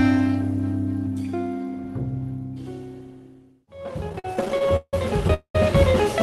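From 4.09 to 5.30 s the audio drags and stutters, with eighteen short holds spread across the span, the longest about 164 ms and together roughly a third of it. These are repeated stalls (stutter): packets arrived late, the jitter buffer kept running dry, and the receiver stretched the last sound each time, so nothing is lost.

At 5.34 s the sound hangs as a fading buzz that drops into about 90 ms of silence before resuming at 5.55 s. This call audio freeze adds a 206 ms gap, likely from packets held up long enough to empty the buffer.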